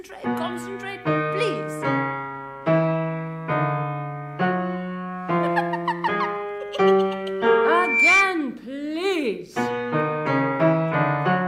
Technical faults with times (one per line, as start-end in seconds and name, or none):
7.63-8.39 loudspeaker feedback squeal